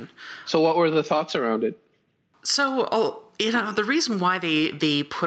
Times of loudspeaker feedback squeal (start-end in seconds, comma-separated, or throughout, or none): none